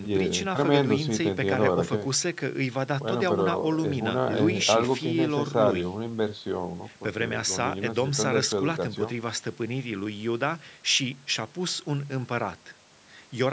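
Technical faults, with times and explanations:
No technical faults can be heard in this speech recording. The call microphone processing shows in a band that stops at 8 kHz and in the lowest bass being trimmed away by its high-pass filter, as that path is meant to do.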